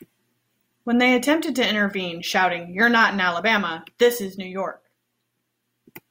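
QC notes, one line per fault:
No faults heard anywhere in the speech.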